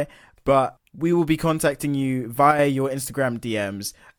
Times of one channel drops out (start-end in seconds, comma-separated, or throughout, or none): 2.51-2.59